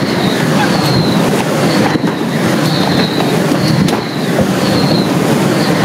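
Gain pumping runs through the whole clip. The swing is large, around 15 dB between the ducked and recovered levels. Loud and quiet moments sit oddly close together, and the sound feels squashed and breathing. The likely cause is input gain set far too high, with a fast limiter or compressor clamping down on each peak and then releasing.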